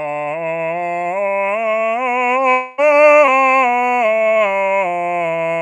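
From 2.51 s to 2.80 s the music gives way to a continuation of its last sound, a buzz or hiss that fades over roughly 0.27 s rather than dropping to silence. When the music returns, about 0.26 s of it has simply been skipped. This is most likely a long network dropout: the stream stopped arriving, the receiver extended the final sound to bridge the hole, and playback resumed further along without the missing material.

At 3.26 s a short concealed packet loss follows, lasting to 3.29 s. Around 20 ms of audio did not reach the decoder in time, so the receiver filled about 15 ms by carrying the preceding sound forward and then blending back into the real signal. It comes across as a brief smear or wobble in the music.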